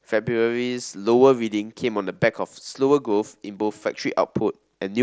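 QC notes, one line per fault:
Nothing to flag here: the speech comes through a Bluetooth mSBC headset link that carries it up to 8 kHz, and no faults turn up anywhere in the clip.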